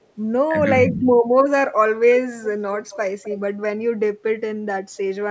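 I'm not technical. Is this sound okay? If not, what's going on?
No, there are two problems in this clip.

The first is speech suppressed in double talk. At 0.5 s the voice dips very briefly and slightly, and from 0.9 to 1.05 s it drops more noticeably, as if someone turned it down for a moment. This is likely the call's echo canceller getting confused when both people talked at once. It couldn't tell the talker apart from the other person's voice coming out of the speaker, so it turned everything down.

The second is an echo leak. Around 2.83 to 2.97 s, and again from 3.23 to 3.4 s, you can catch a faint, delayed copy of the voice trailing about a quarter of a second behind. The second one is a little more audible. The likely cause is a speakerphone on one end whose echo canceller didn't fully remove the sound its microphone picked up from the loudspeaker, so a bit of it got sent back down the line.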